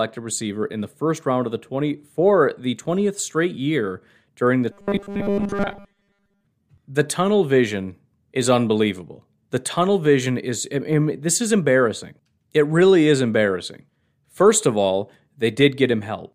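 From 4.72 to 6.45 s, new audio was likely arriving too seldom, so the playback path kept filling the gaps by looping the last short buffer while the real signal was skipped. Roughly seven tenths of that stretch is repeated material, and the loop length points to a buffer of about 5 ms. The result is robotic sound from repeated short buffers: the speech becomes a rigid, metallic 200 Hz buzz that only loosely tracks the words.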